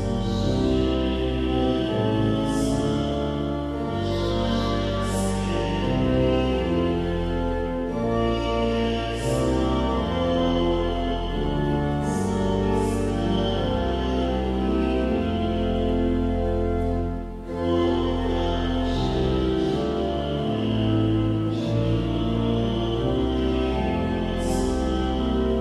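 No technical faults can be heard anywhere in the recording, and the signal holds steady throughout.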